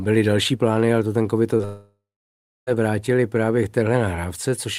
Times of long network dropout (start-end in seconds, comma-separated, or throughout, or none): 1.65-2.69